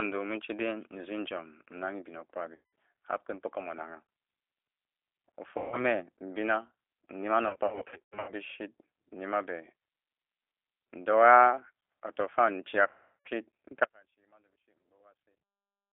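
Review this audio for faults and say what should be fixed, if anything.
G.729 codec, throughout the clip: the speech sits in a narrow 300 Hz to 3.5 kHz line band, and the coding damage is plainly audible as a rough, slightly synthetic edge. At 8 kbit/s the decoder rebuilds each 10 ms frame from a vocal-tract filter, a pitch predictor and a handful of pulses, so fine detail in the voice becomes a buzzy approximation and nothing above the band survives. To prevent it, negotiate a wideband codec such as G.722 or Opus where both ends support it.

VoIP packet loss concealed by the speech codec, at 2.55 to 2.73 s (180 ms lost), 5.58 to 5.81 s (140 ms), 7.48 to 8.32 s (460 ms lost in scattered bursts over 800 ms, the longest run 100 ms), and 12.89 to 13.29 s (360 ms). During each gap the decoder keeps repeating its last pitch and filter while lowering the gain, so the speech smears into a fading buzzy tone or coloured noise. 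Because each frame builds on the previous one, the voice stays weak or distorted briefly after packets resume. The gap lengths fit 20 ms packets. To prevent it, fix the loss on the network path and add a jitter buffer or forward error correction.

Audio dropout to a faint residue, from 13.84 s to the end: the speech cuts off abruptly rather than fading, and all that remains is faint sound roughly 35 dB below the normal level. The chain after the break is still live, so the cause is likely a lost upstream feed or a failed capture path rather than a muted output. To prevent it, monitor the source connection and alert on sudden level loss.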